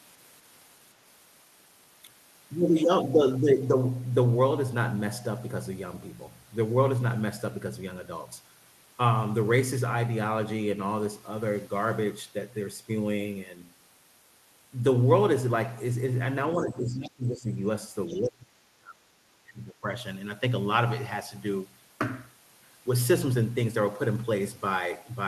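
From 16.63 to 17.52 s the talker's speech dips by roughly 15 dB, which points to speech suppressed in double talk. The echo canceller likely could not separate the near talker from loudspeaker echo while both sides spoke, so it attenuated everything.

At 18.08 to 18.29 s a faint second voice, about 20 dB below the talker, comes through as a brief scrap. This is the other side's voice leaking through, likely residual echo the canceller failed to remove from the microphone. It is a distinct voice, not a smeared tail of the talker's own speech as reverberation would be.

Overlapping it, from 18.18 to 19.88 s, suppression returns more deeply, at roughly 25 dB, and the talker's voice is turned down for about a second and a half.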